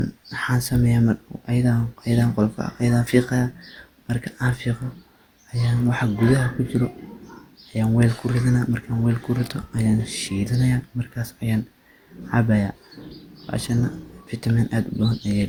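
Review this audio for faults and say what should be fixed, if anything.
Generation loss runs through the whole speech recording. The sound is swirly and hollow, with smeared consonant attacks, worse than one lossy pass would cause. The likely cause is repeated lossy encoding, around four passes of Opus at a setting that fits 64 kbit/s. Each decode and re-encode quantises again on a shifted frame grid, so noise accumulates. Content still reaches 20.2 kHz. Keep a lossless master and encode only once, at the final step.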